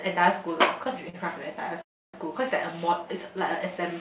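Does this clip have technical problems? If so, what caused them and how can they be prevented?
Yes. At 1.09–1.16 s there is a short stall from a late packet. The jitter buffer ran dry, so about 40 ms of sound was stretched before playback resumed with nothing lost. Unlike a freeze, it is a held sound, not silence. A slightly deeper jitter buffer would absorb this.

At 1.82–2.16 s a call audio freeze inserts a 320 ms gap, almost all of it silent. This is likely caused by packets held up in the network. The silence and the length separate it from the brief stretch above. Steadier network routing or adaptive buffering would prevent it.

The narrow G.711 call band, with nothing above 4 kHz, is heard throughout.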